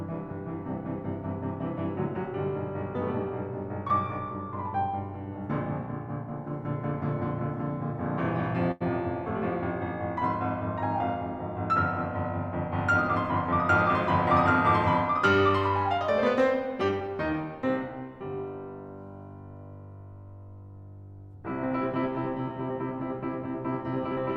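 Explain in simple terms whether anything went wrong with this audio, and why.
Two faults from the network playback path are audible in this music. At 8.71 to 8.83 s there is a short stall from a late packet. The next piece of audio had not arrived in time, so the player stretched the last sound for about 91 ms until it came, then carried on from the same point. Nothing is lost, but that moment hangs and the playback falls 91 ms further behind.

From 16.43 to 17.09 s there is a jitter buffer speed-up. The player was holding more audio than it needed, so it snipped out many tiny slices, around 70 ms in total, to catch up. The music runs at 108% speed with unchanged pitch, and the tempo briefly rushes.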